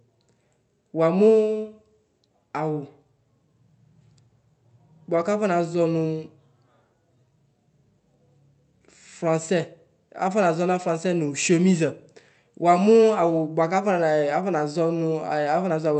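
The speech signal shows no technical faults, and the Opus call path it passed through behaves as expected, with its bandwidth reaching up to 8 kHz.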